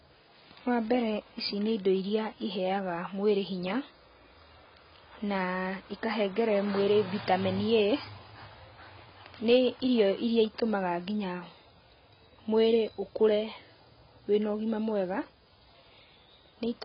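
From start to finish the speech sounds dull and smeared, with nothing above 5.3 kHz and a warbling, fizzy texture on sibilants. This is likely heavy AAC compression, consistent with AAC-LC at around 16 kbps, which cuts the top band and coarsely quantises what remains.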